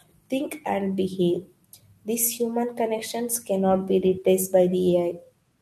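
No technical faults can be heard anywhere in this speech recording. There is no moment in the audio that calls for a timestamp or an explanation.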